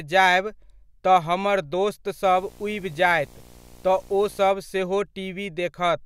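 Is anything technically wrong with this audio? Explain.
Yes. From about 2.24 to 4.51 s there's video or display buzz riding under the speech. A screen or video cable is leaking into the audio path, so you get a buzz locked to the 60 Hz picture field rate, with a layer of gritty hash sitting above it. It's not loud, roughly 25 dB below the speech.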